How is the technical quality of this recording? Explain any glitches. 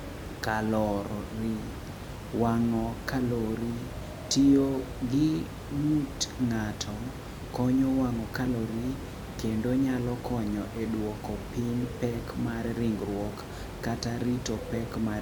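No glitches: the speech runs unbroken throughout, with only the room's own background noise sitting about 10 dB beneath it, which belongs to the recording space rather than the signal chain.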